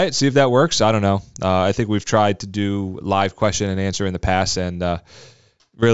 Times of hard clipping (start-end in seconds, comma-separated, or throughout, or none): none